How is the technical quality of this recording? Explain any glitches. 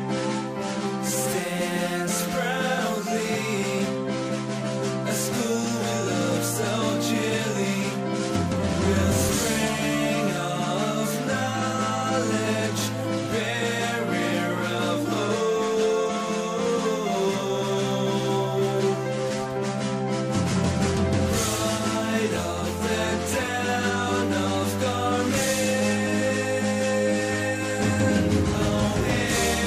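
No glitches or technical faults can be heard anywhere here.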